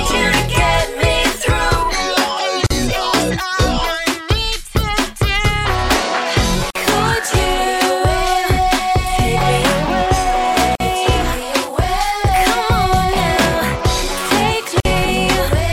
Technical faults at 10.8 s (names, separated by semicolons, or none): gap at a join of encoded pieces